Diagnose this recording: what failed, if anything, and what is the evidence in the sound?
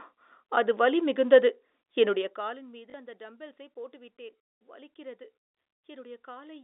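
Zipper noise sits in the call-processing gain stage. From 2.08 to 2.74 s, just after "அது வலிமிகுந்தது", the level drops by roughly 20 dB. A fine ticking rides on the speech while it falls. The gain moves in discrete jumps, about a hundred a second, instead of gliding. Each jump puts a tiny discontinuity in the waveform, and those clicks run together into a zipping texture. Once the level settles the ticking stops.

Packet loss with the last packet repeated shows up at the network stage. At 2.90 to 2.94 s, just before "அந்த டம்பெல்ஸைப் போட்டு விட்டேன்", there is a brief robotic stutter lasting about 40 ms. That length fits two lost 20 ms packets. The receiver filled the gap by replaying the last good packet. The run buzzes at the packet rate. The narrow telephone band of the G.711 line is still heard around it.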